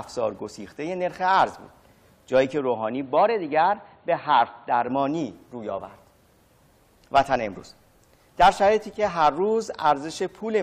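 From 2.59 to 4.88 s the sound turns dull and boxy, with nothing above 4.4 kHz, and a faint new background noise appears. Level stays about the same and no gap marks either switch. The likely cause is an input switched to a poorer device. The change in noise alongside the narrower band distinguishes this from a simple low-pass filter.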